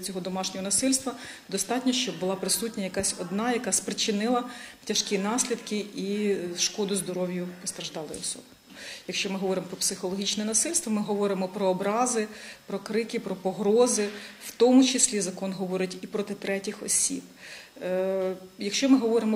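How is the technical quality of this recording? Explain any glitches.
Nothing here trips me up: I couldn't find a single glitch worth pointing out anywhere in the recording.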